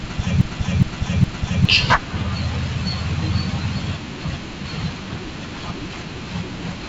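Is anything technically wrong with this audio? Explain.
Yes. A broken-record loop runs from 0 to 1.65 s and is already under way when the clip starts. A 0.41 s fragment repeats exactly, back to back, three times. A stalled player or stream likely kept resending its last piece. The audio for that span is lost.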